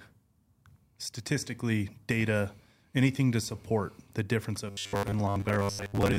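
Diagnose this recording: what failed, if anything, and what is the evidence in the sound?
From 4.68 s to 6.18 s, just after "to support the difference", the voice hardens into a stiff metallic buzz fixed at 100 Hz: robotic sound from repeated short buffers. Likely a driver or buffer stage starved of data, looping a 10 ms slice over most of the real audio.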